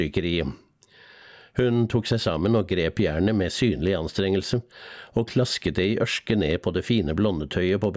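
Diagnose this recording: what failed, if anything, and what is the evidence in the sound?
Gain pumping runs through the whole recording: the gain swings by around 10 dB under every loud sound, leaving loud and soft parts squashed together. The likely cause is input gain set far too high, with a fast limiter pulling it down. Separately, the call-processing band stops at 8 kHz, which is normal.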